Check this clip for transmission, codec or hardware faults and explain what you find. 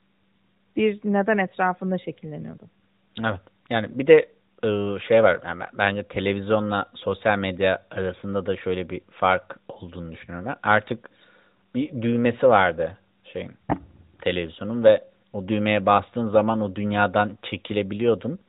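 Nothing wrong found in the chain: the speech comes through an AMR narrowband mobile codec, band-limited to 4 kHz as that path requires.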